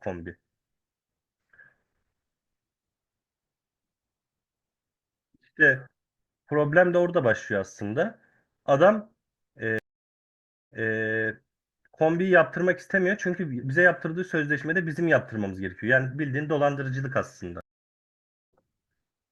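Stream reconnects break this speech clip at 9.79 to 10.95 s and 17.61 to 18.54 s. Each time the connection drops, the audio goes silent for about 0.9 s, and a fresh decoder resumes mid-stream: first repeating about 0.24 s, then skipping roughly half a second.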